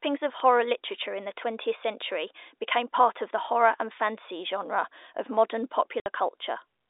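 At 0.40 s, just before "literature in the", a bit error spike gives a single sharp tick. A flipped bit throws a few consecutive samples off by a power of two before they snap back. Unlike a dropout or clipping, it lasts no time and ignores the speech around it.

From 6.00 to 6.06 s, right after "fantasy genre of modern", comes packet loss filled with silence: a 60 ms hole with hard edges, which fits three lost 20 ms packets. It differs from concealed loss, which would smear or repeat sound rather than go dead, and the telephone-band G.711 line carrying it is heard limited to about 300 Hz to 3.7 kHz.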